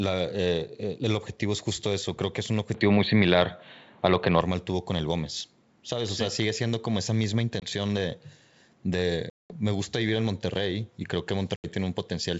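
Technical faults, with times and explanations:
2.75–4.41 s, input switched to a poorer device (likely): the sound turns boxy with nothing above 4.4 kHz, a level shift of about 5 dB, and new background noise about 40 dB down.
7.60–7.69 s, 9.30–9.57 s and 11.56–11.66 s, packet loss on an ADPCM call: hard-edged silences of 20, 200 and 80 ms. The decoder's predictor and step size lose sync, so the sound resumes slightly distorted before settling.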